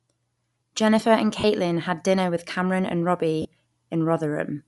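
From the start the speech carries a breathy, grainy sheen on sibilants and upper harmonics, the mark of likely Bluetooth LC3 compression. The transform codec has discarded much of the upper spectrum and refilled it with noise, which fits a 48 kbps stream in 10 ms frames. Unlike a plain low-pass filter, which only dulls the top end, the highs here are present but hissy and textureless.

At 1.40 to 1.45 s, the first lost LE Audio frames leave a brief noisy smear of about 40 ms, consistent with four 10 ms frames dropped. The decoder repeated the last spectrum with scrambled phase, so the pitch dissolves into hiss instead of cutting to silence. A second, shorter smear of about 30 ms follows at 3.42 to 3.45 s. A network dropout with zero-filling would give a hard gap or click, but these concealed frames produce a brief noisy wash.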